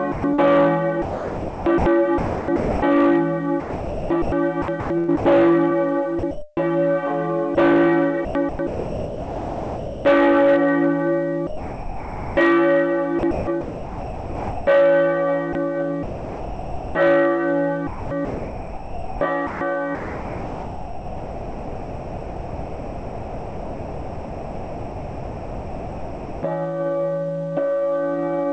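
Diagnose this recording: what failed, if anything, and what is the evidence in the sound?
Call processing: the sender's voice detector likely kept switching transmission on and off. Sound is chopped by the voice detector at 0.12–6.57, 7.55–10.05, 13.19–14.67, 15.53–16.95 and 17.87–26.43 s, and the holes are filled with comfort noise.

Call processing: sound dropped by the voice detector from 11.47 to 12.37 s, likely because it mistook the sound for background. It gives way to 0.9 s of steady comfort noise over a G.722 path with nothing above 8 kHz.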